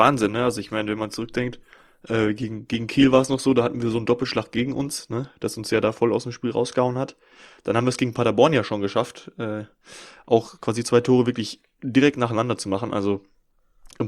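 An adaptive stream started at a low bitrate: for the first 6 s the speech sounds dull and smeared, fitting roughly 24 kbit/s Opus, then jumps cleaner before "aus dem".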